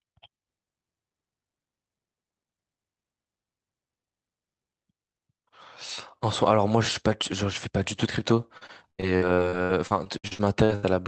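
From 8.57 s to 10.85 s the speech suffers repeated packet loss (robotic sound): packets keep going missing or arriving too late, and each hole is patched by stretching out the sound that came just before it. Across this span there are 15 such gaps, the longest lasting 79 ms, and about 28% of the span is concealment rather than real audio. The speech turns choppy, with fragments dropping out. All of it sits on a call path whose top end stops near 8 kHz, which fits Opus at about 24 kbps.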